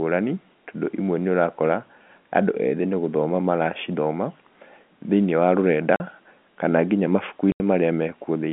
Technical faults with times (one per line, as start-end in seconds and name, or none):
5.96-6.00 packet loss filled with silence
7.52-7.60 packet loss filled with silence